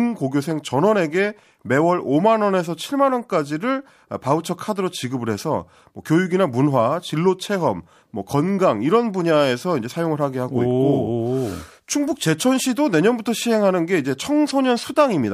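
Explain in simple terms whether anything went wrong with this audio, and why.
Nothing went wrong here.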